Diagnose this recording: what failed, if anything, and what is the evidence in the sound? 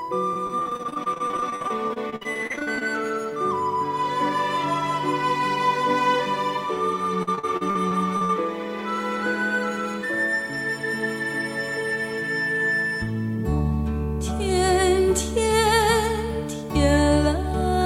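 The network stage failed, causing repeated packet loss (robotic sound) from 0.33 to 2.83 s and again from 7.23 to 8.31 s. Dropouts of up to about 50 ms recur rapidly, each patched by extending the previous sound. Roughly a quarter to a third of each stretch is synthetic, giving a choppy texture.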